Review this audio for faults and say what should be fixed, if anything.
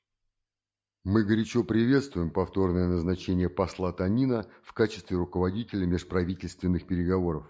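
No faults; nothing needs fixing.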